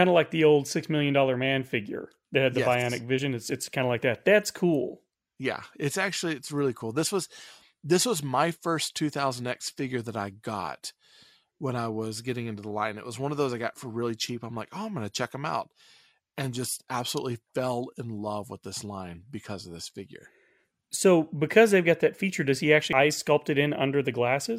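At 3.15 to 3.19 s, just before "it's it's kind of", there's a brief glitch that comes from damaged data in the compressed stream. Some bytes in those frames got corrupted, so the decoder misread them, lost sync and had to hunt for the next valid frame header. It happens again at 22.93 s, right after "that feature does he", this time as a tiny blip only a few milliseconds long.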